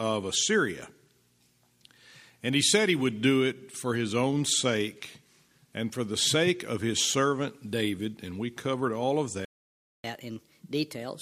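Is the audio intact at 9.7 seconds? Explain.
No, at 9.7 seconds the sound has dropped out entirely. It sits inside a playback stall running from about 9.45 to 10.04 s, so roughly 0.59 s of silence cutting off the audio mid-flow. That points most likely to the player running dry on data or its thread getting blocked, leaving the output with nothing to play until it catches up. Once it recovers around 10.04 s, the sound picks up again.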